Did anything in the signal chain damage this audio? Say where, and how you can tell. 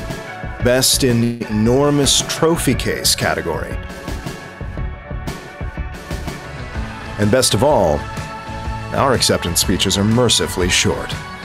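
Yes. From 1.23 to 1.42 s the sound stalls into a fading buzz, a smeared, decaying band on the spectrogram, likely a network call audio freeze draining the jitter buffer.

Right after, a skip ahead at 1.48 to 1.51 s drops about 100 ms. The jump splices the waveform almost directly.

Jitter buffer slow-down at 1.72 to 1.98 s (87% speed) and 3.77 to 4.37 s (90%) repeats pitch periods, stretching spectrogram features at unchanged pitch.

A jitter buffer speed-up from 6.92 to 8.45 s runs at 106%, trimming about a tenth of a second of pitch periods while the pitch stays the same.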